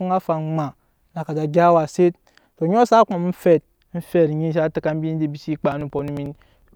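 From 5.63 s to 6.62 s the speech is hit by periodic USB or driver dropouts: roughly every 0.09 s a fragment of around 10 ms goes missing, about ten times in all. The missing audio is skipped rather than filled, so the waveform jumps straight from one point to a later one. Each jump produces a tick, heard as a steady clicking pattern over the speech until the dropouts stop.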